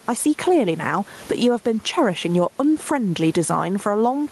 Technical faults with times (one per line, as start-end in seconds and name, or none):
0.00-4.32 gain pumping